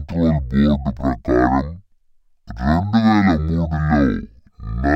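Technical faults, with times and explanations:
Throughout: stereo read as mono. The left and right samples, stored alternately, are played back in turn as one channel. Each stereo frame becomes two mono samples, so the speech runs at 0.5x speed and sits 12 semitones lower, a full octave, with a faint mirrored copy in the upper spectrum.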